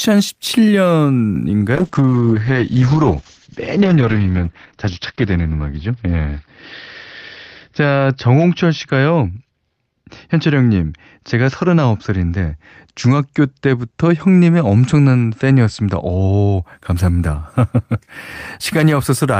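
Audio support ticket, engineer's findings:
Call bitrate drop, 1.77–16.69 s: speech turns muffled and watery as the encoder codes coarsely. Spectrogram shows the top cut from 20 kHz to 6 kHz, fitting a fall toward 8 kbps, worst for about 2.96 s.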